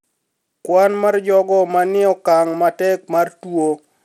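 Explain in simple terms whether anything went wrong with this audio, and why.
Something did go wrong, and it lasts from start to finish. The speech has the gritty, metallic edge of Bluetooth SBC compression, likely from being sent over a wireless link. SBC splits the sound into a few broad bands and gives the weaker top ones too few bits, so the highest sounds vanish entirely above 17 kHz and a rough grain clings to what remains. A simple treble cut would just sound duller. Here the sound is both duller and grainy.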